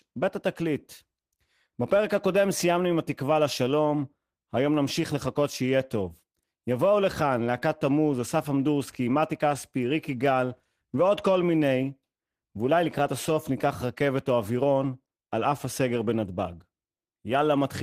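No technical fault can be heard anywhere in this speech recording. There is no moment that calls for a time mark or a measurement.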